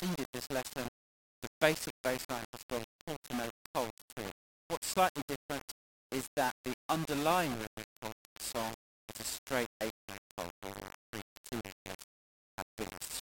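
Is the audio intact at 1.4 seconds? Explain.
No. At 1.4 s, as throughout, the signal likely sits on a 5-bit grid, rounded without dither, so error tracks the signal as gritty distortion or steady hiss about 10 dB below it.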